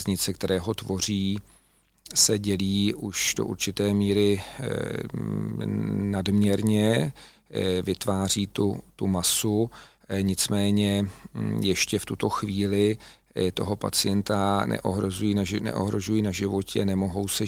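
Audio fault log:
No fault is audible anywhere in this speech recording, and the signal holds steady with nothing in its level, timing or bandwidth calling for a log entry.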